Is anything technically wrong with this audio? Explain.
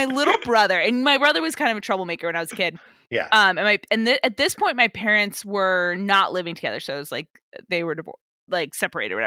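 Yes. At 0.33 s, just before "brother and my brother", and at 3.13 s, just after "I was a kid", a lost packet was likely rebuilt from error correction: the decoder played the low-bitrate copy carried in the next packet. Each 20 ms stretch sounds briefly rougher and noisier rather than dropping out.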